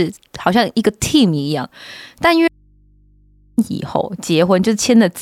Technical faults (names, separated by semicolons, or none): audio dropout to a faint residue